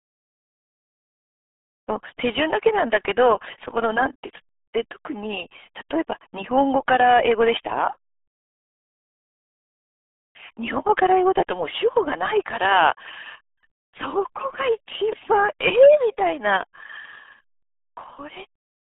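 The RealAudio 14.4 codec affects the speech from start to finish. This early dial-up speech codec squeezes the signal into a very small data budget, consistent with about 8 kbit/s. The speech is confined to roughly 250 Hz to 3.5 kHz, with nothing above 3.8 kHz, so it sounds muffled and boxy. The codec's coarse modelling of the voice also adds heavy gargling, watery distortion.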